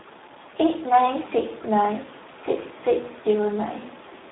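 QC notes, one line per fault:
throughout Speex codec: speech sounds hoarse, buzzy and a bit robotic, squeezed into 250 Hz to 3.7 kHz with nothing above 3.8 kHz, which fits a starved 8 kbps setting.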